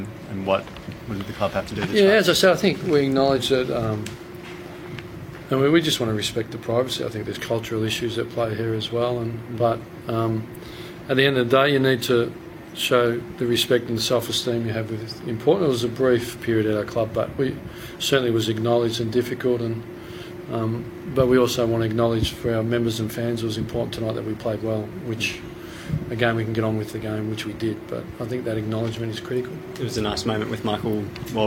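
From 1.68 to 3.38 s and again from 29.31 to 30.85 s, the sound runs about 5.7% fast and rises nearly a semitone, then snaps back. That's likely a drift correction step, where clock-matching software jumped the playback rate to rebalance its buffer.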